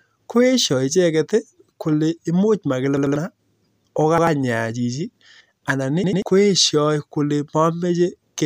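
A speech clip with repeated buffer stutters at 2.97–3.16 s, 4.18–4.27 s and 6.04–6.22 s, where a roughly 93 ms chunk replays two, one and two extra times with hard joins. That fits a 4096-sample buffer being replayed when fresh audio arrived late, skipping a split second each time.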